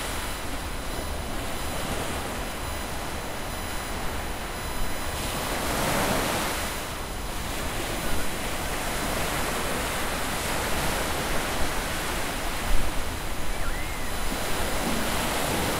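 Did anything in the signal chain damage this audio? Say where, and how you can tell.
Yes. USB whine runs through the whole recording as a steady 1 kHz tone, roughly 15 dB below the sound. It enters in the analogue wiring: the USB bus's 1 ms frame current leaks through power or ground, fixing the pitch at 1 kHz.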